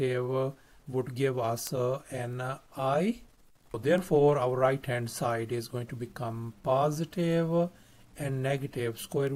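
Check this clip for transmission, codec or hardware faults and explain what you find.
Word clock ticks run from 0.35 s to 9.27 s. About every 0.3 s a sharp tick sounds, uneven in strength. The receiving clock drifts roughly 70 ppm from the sender's. Each time they slip, a single sample is dropped or repeated.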